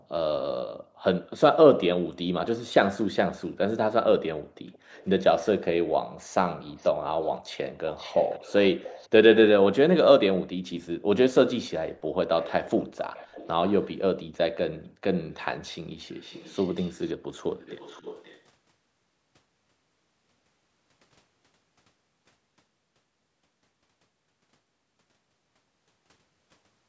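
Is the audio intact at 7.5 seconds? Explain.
No. From 6.69 to 9.09 s there is an echo leak: a faint, delayed copy of the speech trails the original by about 0.52 s, roughly 20 dB quieter. The likely cause is a far end playing the call on a loudspeaker whose echo canceller let part of the returning audio through. On a spectrogram, the speech's harmonic pattern reappears half a second later as a fainter ghost. On the waveform, low-level bumps fill gaps that should be silent.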